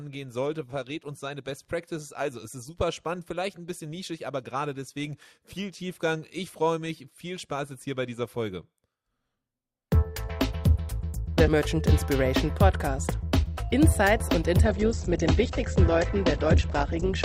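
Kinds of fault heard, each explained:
Adaptive stream at a lower bitrate: The stream switched to a cheaper version of the audio when the connection slowed. At 14.65 s the quality drops at once and stays low to the end, with no gap at the switch. Nothing remains above 8.2 kHz, so the top end sounds dull, and coding artefacts rise. The change is consistent with Opus moving from about 64 kbit/s down to about 12 kbit/s.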